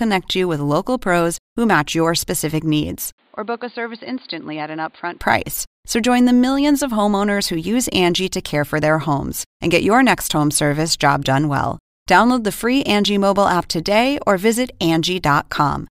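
A speech clip that, just after "match your specific needs", turns dull and boxy from 3.18 to 5.21 s, with nothing above 4.8 kHz, about 10 dB quieter, and with a faint new noise floor. This is likely the input switched to a poorer device.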